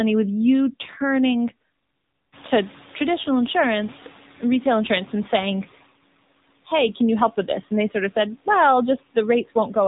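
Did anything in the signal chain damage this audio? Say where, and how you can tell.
Yes. The damage is at the codec stage, and it lasts the whole clip. This is the AMR narrowband mobile codec. Nothing passes above 3.8 kHz, so the speech sounds thin and phone-like. The damage is plainly audible as a buzzy, synthetic edge. The codec rebuilds speech from a vocal-tract model excited by a few pulses per 5 ms slot. At a low 7.4 kbps, that model has few bits, so the voice comes out buzzier and more synthetic. The room noise that rises around 2.5 s is part of the recording, not a fault.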